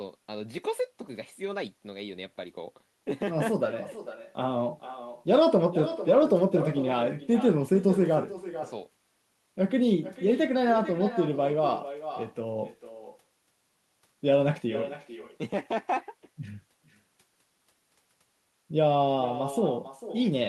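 From start to finish the speech carries an echo with no canceller. The far end's loudspeaker output reaches its microphone and returns uncancelled. Each phrase is trailed, roughly four-tenths of a second later, by a thinner copy about 12 dB down.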